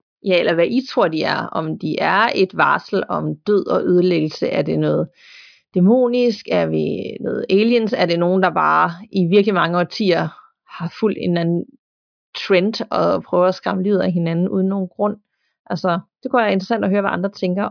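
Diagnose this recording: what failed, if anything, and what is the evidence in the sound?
Nothing in the speech signal points to a failure at any stage of the chain, from the analogue front end and converter through processing, transmission, storage and playback.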